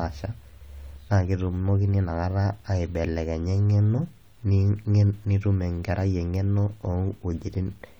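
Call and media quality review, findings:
No faults found on this clip.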